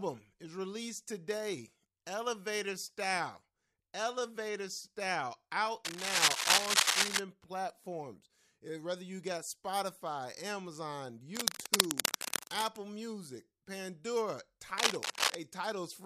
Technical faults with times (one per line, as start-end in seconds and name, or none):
5.85-7.19 cable scratch noise
11.35-12.77 cable scratch noise
14.78-15.35 cable scratch noise